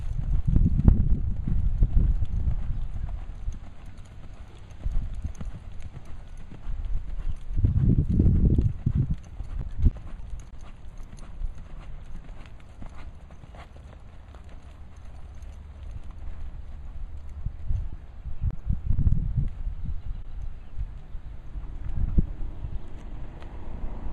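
From 9.61 to 10.55 s there is repeated packet loss, giving a robotic sound. Four separate gaps fall inside this stretch. None is longer than 20 ms, and about 60 ms of audio is missing in total. Each time, the receiver continues the last sound to cover the hole. These patches fill about 8% of the stretch. Because they come close together, the sound turns choppy with pieces missing.

Next come two cases of short concealed packet loss. The first runs from 17.91 to 17.95 s and the second from 18.51 to 18.55 s. Each loses 20 ms of audio. The decoder covers each hole with an extension of the preceding sound, then blends back into the real signal. Each event is heard as a brief smear or wobble.

At 20.23 to 20.27 s there is a short stall from a late packet. That packet missed its slot, and the jitter buffer ran dry. The receiver held the last sound for about 20 ms until the packet arrived. Playback then resumed from the same point, so no audio was dropped. 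Playback runs about 20 ms later afterwards. The result is a sound held slightly too long, with a slight buzz or dip.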